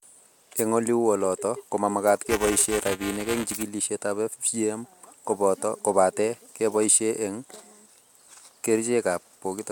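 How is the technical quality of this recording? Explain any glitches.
The recording has one clear glitch, buffer tearing, from 2.27 to 3.63 s. The speech takes on a robotic rattle there, buzzing at 375 Hz. That rate fits a 128-sample buffer. The writer and the playback hardware have slipped out of step, so they cross inside each period. A small slice of every buffer still holds audio from a few milliseconds earlier. Hard joins on either side of that slice repeat at the buffer rate, producing the buzz.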